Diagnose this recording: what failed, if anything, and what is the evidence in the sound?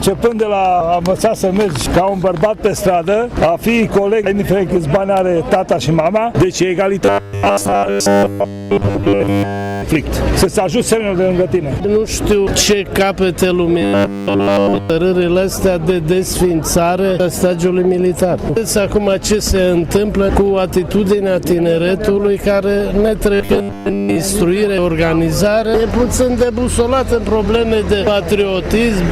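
Robotic sound from repeated short buffers at 7.05–9.82 s, 13.82–14.90 s and 23.34–24.16 s, likely a buffer underrun. A 100 Hz buzz fits one 10 ms block replayed in place of skipped audio, fully in the first two spans and mostly in the third. Spectrograms show rigid 100 Hz harmonic lines, and the waveform repeats every 10 ms.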